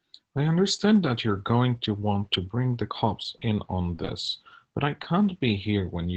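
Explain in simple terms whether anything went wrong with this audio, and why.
From 3.37 to 5.51 s, about three tiny ticks and smears. These are scattered short gaps, where lost audio was patched by extending the sound just before.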